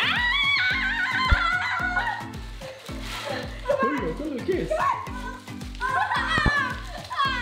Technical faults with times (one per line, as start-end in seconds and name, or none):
1.32-1.35 loud pop
6.38-6.50 loud pop